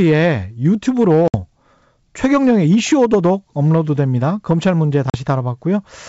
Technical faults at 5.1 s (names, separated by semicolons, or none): hard clipping; packet loss on an ADPCM call